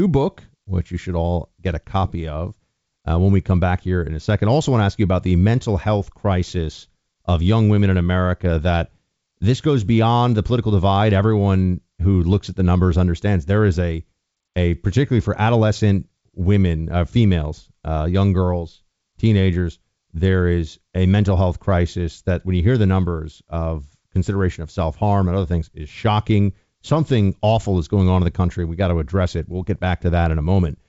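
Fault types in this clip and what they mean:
No faults found; the speech runs over the G.722 wideband path at 64 kbit/s, where any coding trace is faint at most.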